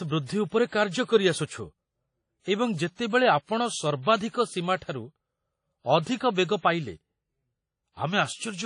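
From start to finish the speech has a ringing, washy quality, with a hiss that swells and fades with the signal and nothing above 10.1 kHz. This is likely WMA compression at a low bitrate, consistent with about 32 kbps, where long transform blocks smear quantisation noise and weak components are dropped.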